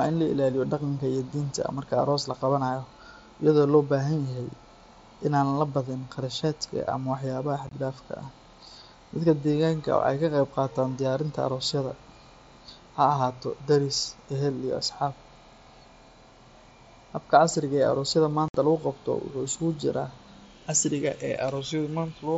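Around 7.67 s, unconcealed Bluetooth headset packet loss chops the speech: about 37.5 ms goes missing in bits over 60 ms, the longest gap 22.5 ms, with abrupt edges. At 18.48 s a 60 ms loss drops out of the mSBC link, with nothing filled in.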